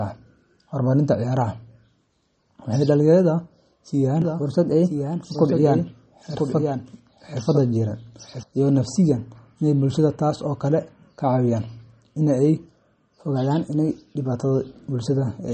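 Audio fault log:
throughout MP3 compression: likely encoding at a low bitrate, which fits about 32 kbps, where weak frequency lines were dropped and switched on and off between frames and the treble was removed above 8.4 kHz, leaving plainly audible watery, swirly speech with smeared attacks.
4.22–8.43 s doubled audio track: a second copy of the sound, about 5 dB quieter and trailing by roughly a second, was mixed in, likely through a slower second capture path or misaligned edit, giving a dry full-band echo that starts and stops abruptly.
4.43–5.54 s and 12.56–14.32 s drift correction step: clock-matching software changed the playback rate in one step, likely to refill or drain its buffer, speeding the sound up by 5.89% and raising pitch by 99 cents, nearly a semitone, before snapping back at each range's end.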